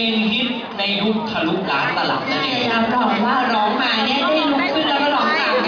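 Nothing goes wrong anywhere in this audio, so there's no technical fault to walk through.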